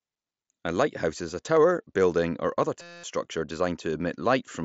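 Speech recording with a system hang loop from 2.82 to 3.04 s, right after "tower building or other". A 5.8 ms slice of audio repeats 38 times, producing a steady buzz at 172 Hz. This fits a frozen driver while the hardware kept cycling a 256-sample ring buffer, and roughly 200 ms of audio is lost. The speech carries the band limit of a Bluetooth mSBC headset path, with nothing above 7.7 kHz.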